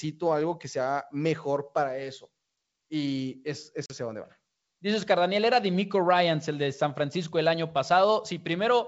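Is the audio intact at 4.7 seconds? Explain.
Yes, the audio is intact at 4.7 seconds, with no fault there, and the speech comes through the G.722 wideband telephone coding at 64 kbit/s as that path normally sounds.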